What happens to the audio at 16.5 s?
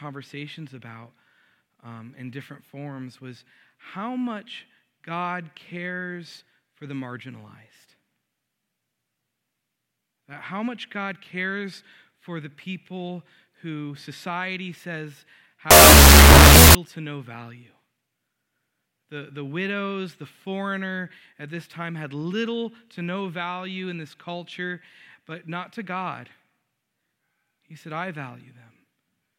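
From 15.71 to 16.75 s, wrong sample width: 16-bit data read as unsigned 8-bit becomes loud noise at half speed and lower pitch, which byte-swapping lacks.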